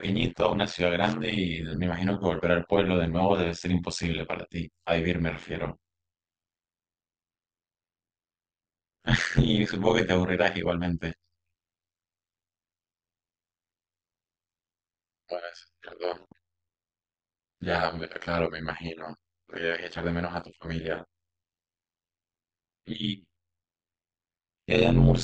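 From start to finish the speech carries a harsh, buzzy flutter, a robotic tremolo so fast it fuses into a rasp at around 100 Hz, with the level swinging through about 60 dB on every cycle. This is overlap-add ripple. The audio was split into windowed frames and rebuilt with overlapping windows whose gains fail to add up to a constant, so the level dips deeply once per frame, at roughly a hundred frames per second.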